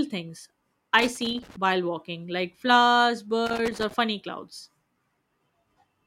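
Loose connector crackle appears from 0.99 to 1.56 s, before "while walking like flowers", and again from 3.46 to 3.94 s after it: a worn contact chopping the speech into irregular scratchy bursts.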